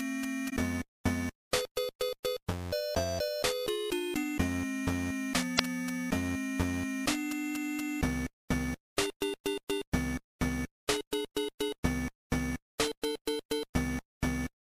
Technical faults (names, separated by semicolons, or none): damaged data in a compressed stream